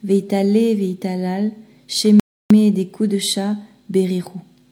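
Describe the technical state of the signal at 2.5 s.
At 2.5 s the signal is just emerging from a rebuffering stall spanning 2.20 to 2.51 s: the player ran dry of downloaded audio and halted, inserting about 0.31 s of silence. The sound then resumes exactly where it stopped. Waveform and spectrogram show a flat, empty gap.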